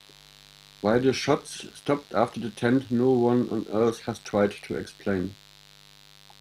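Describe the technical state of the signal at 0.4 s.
Mains buzz is present at 0.4 s, as it is across the whole speech clip: sharp switching spikes at twice the 50 Hz mains rate spray harmonics up into the kilohertz range, giving a steady, raspy buzz sitting roughly 30 dB below the speech.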